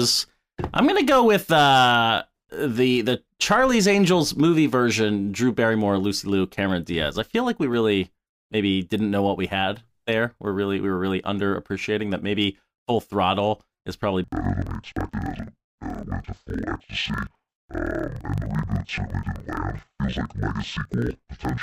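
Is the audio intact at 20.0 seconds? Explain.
No, 20.0 s falls inside the interleaved audio read as planar fault running from 14.24 s, right after "is probably", to the end. Each roughly 43 ms block, which fits 2048-sample blocks, gets split into half-speed left and right copies, so the speech drops an octave, sounds doubled and choppy, with a 23.4 Hz flutter.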